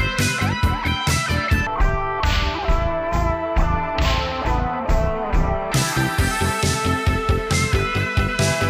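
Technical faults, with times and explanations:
1.67–5.72 s, stereo read as mono: left and right samples, stored alternately, are taken as one channel in sequence, so the sound runs at half speed (0.5x), an octave lower (12 semitones down). A spectrogram shows content compressed downward, with a fainter mirrored copy in the upper half.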